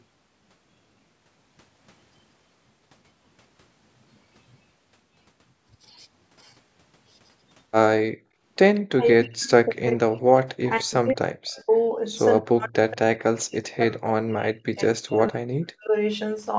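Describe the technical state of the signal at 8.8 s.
At 8.8 s an echo leak is ending: from 8.75 to 8.8 s a very faint scrap of sound returns 182 ms after the original. This is likely an echo canceller on the far side letting some of its loudspeaker's output back through the microphone. Unlike room reverberation, it is a separate delayed copy rather than a smooth tail.

From 8.9 to 10.29 s comes speech suppressed in double talk. The level dips in pieces, very deeply at worst, adding up to about a second. The likely cause is an echo canceller that could not separate the talker from the echo while both sides spoke, so it turned both down. Unlike packet loss, these are level dips tied to the other side speaking, not lost packets.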